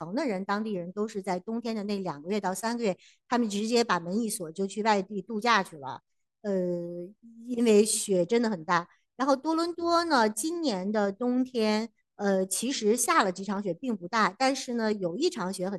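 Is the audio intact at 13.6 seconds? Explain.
No. At 13.57 s a single sharp click points to dropped samples, likely a fraction of a millisecond of speech lost from the stream. The waveform jumps abruptly to a later value, and the spectrogram shows a thin vertical line across all frequencies.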